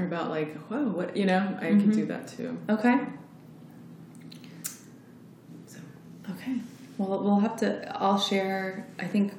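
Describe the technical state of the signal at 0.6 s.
At 0.6 s the signal is intact, with no audible dropout, distortion, noise or other fault at that point.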